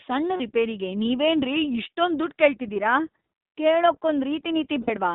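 A speech clip carried through the iLBC codec: the band runs only from about 200 Hz to 3.7 kHz, and the voice has a plainly rough, synthetic edge, which fits the 15.2 kbps iLBC mode with 20 ms frames. A spectrogram shows an empty region above 3.7 kHz. Lost iLBC frames cause two brief held, buzzy vowel-like patches, from 0.36 to 0.42 s (40 ms) and from 4.82 to 4.90 s (60 ms), where the decoder repeats the last pitch cycle mixed with noise. The waveform shows repeating periodic cycles, and clear speech returns at once.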